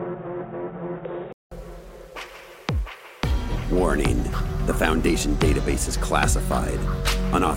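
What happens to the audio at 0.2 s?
At 0.2 s the audio is inside a stretch from 0.0 to 1.51 s that sounds dull and boxy. Nothing comes through above 3.8 kHz. A faint background noise sits well under the signal, and the loudness matches the rest. The likely cause is an input switched to a poorer device, a narrower-band microphone or headset call profile, with its own tone and noise. At 1.51 s a gap of about 189 ms marks the switch before the fuller sound returns.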